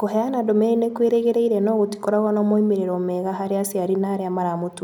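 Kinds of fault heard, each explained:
Nothing stood out on listening to the speech.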